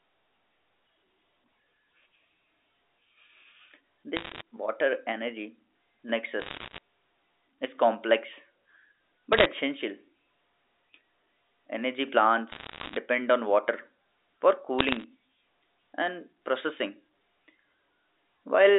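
Bit errors on a digital phone line crackle over the speech at 4.17–4.41, 6.40–6.78, 9.33–9.46, 12.52–12.97 and 14.79–15.04 s. Roughly one bit in a hundred flips on the A-law line. Each flip spoils one sample, and sign or high-bit hits snap out as sharp ticks.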